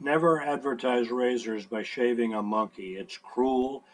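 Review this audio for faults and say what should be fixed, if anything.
From 2.79 s to the end of the speech at 3.94 s, a low buzz at about 21.5 Hz rides on the signal, rising and falling with its level. This is a filter restarted on every block: the filter's memory is cleared at each block boundary, so every block starts from silence and opens with a small transient. The repetition rate fits a 2048-sample block. To prevent it, carry the filter state across blocks instead of reinitialising it per call.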